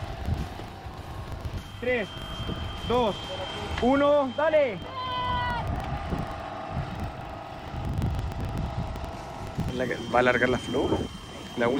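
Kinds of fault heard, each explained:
Filter restarted on every block: a filter in the chain discards its internal state at each block boundary and begins every block as if the input before it had been silent, so each block opens with a small settling transient. Throughout the clip these transients repeat at about 23.4 Hz, which fits a 2048-sample block, and merge into a low, regular buzz that grows and shrinks with the level of the sound.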